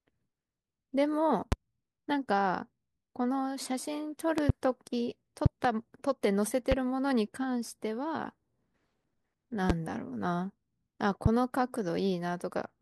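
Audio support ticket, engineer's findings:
Loud pops over the speech at 1.52–1.55, 4.38–4.52 (double), 5.46–5.67 (double), 6.72–6.75, 9.70–9.72 and 11.26–11.29 s, peaking about 20 dB above it. Likely a flaky connector or static discharge dumping voltage spikes onto the line. Speech carries on underneath.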